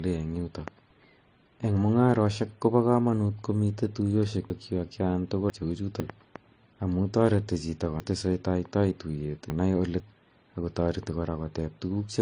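From start to finish the speech carries the signature of transcoding between lossy codecs. Nothing is present above about 9.8 kHz, and two flavours of damage sit on top of each other: MP3-style pre-echo smear around consonants and the warbling, swirly texture of AAC-LC at a low rate. The likely cause is an MP3 at around 36 kbit/s re-encoded to AAC-LC near 32 kbit/s. A single low-rate encode would show only one of these textures, not both stacked.

Between 4.5 and 6.0 s comes the first case of chunks out of order. A half-second piece of audio plays after the two pieces that should have followed it, so the syllables come out jumbled, with three hard joins. From 8.0 to 10.0 s the same fault recurs, this time with a half-second chunk arriving three chunks late, just before "ako tareti". Unlike a dropout or packet loss, nothing goes missing or silent. All the sound is there, just in the wrong sequence.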